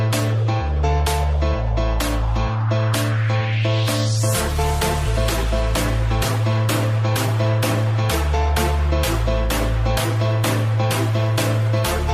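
No technical faults can be heard anywhere in the audio, and the signal stays steady and intact throughout.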